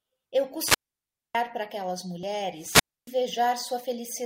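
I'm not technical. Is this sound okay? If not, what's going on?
No. The wireless microphone's radio signal fades, so the receiver's squelch mutes the audio: hiss, then a 0.61 s silence at 0.58–1.39 s, and a 0.28 s silence at 2.56–3.17 s. This is a wireless microphone squelch dropout.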